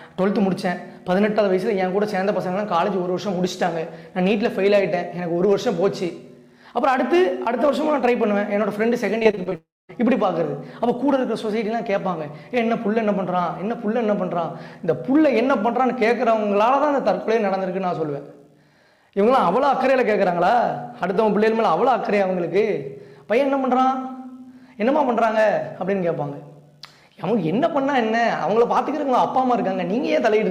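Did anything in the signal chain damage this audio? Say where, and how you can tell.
Yes, the damage is at the network stage. Repeated packet loss (robotic sound) runs from 9.19 to 9.53 s. The audio turns choppy because a rapid series of short holes, the longest about 23 ms and about 120 ms in total, was each patched by extending the last bit of sound. About a third of that stretch is concealment rather than real audio, which gives it the stuttering texture.

Straight after that, from 9.55 to 9.91 s, the sound gives way to a continuation of the last fragment that fades out, followed by about 220 ms of silence before the audio resumes. Roughly 340 ms is simply gone. The likely cause is a long network dropout: nothing arrived, the receiver stretched what it had until that ran out, and playback picked up later without the lost part.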